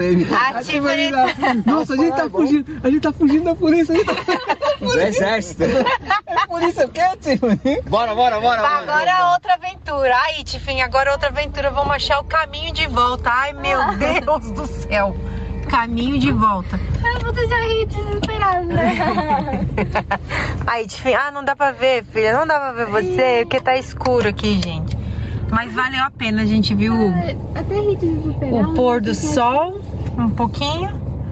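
Gain pumping runs through the whole clip. The gain swings by around 15 dB. Loud and soft parts sit squashed together. The likely cause is input gain set far too high, with a fast limiter clamping every peak. The call-path band limit sits at 8 kHz.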